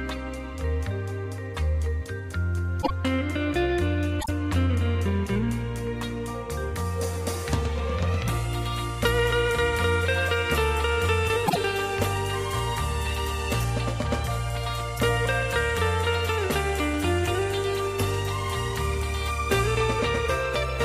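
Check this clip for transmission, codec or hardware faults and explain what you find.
Three short faults, all frames out of order, occur at 2.82 to 2.91 s, 4.20 to 4.29 s and 11.46 to 11.57 s. Each time, two neighbouring blocks of about 26 ms were decoded in swapped order, so the sound briefly plays its halves back to front. This causes a quick garbled flutter, and no time is lost. On a waveform or spectrogram, short abrupt discontinuities appear at each join, with the texture jumping rather than flowing.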